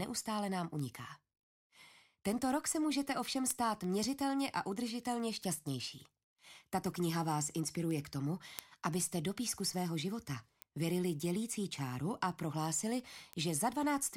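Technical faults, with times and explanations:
0.12 to 14.01 s, word clock ticks: sharp ticks of uneven strength recur at a steady rate, about every third of a second, around forty in all. A receiving device running on its own clock, not locked to the sender's, reads the digital link; with the two clocks differing by roughly 70 parts per million, they slip past each other repeatedly, and at each slip a few samples are misread and a single sample is dropped or repeated.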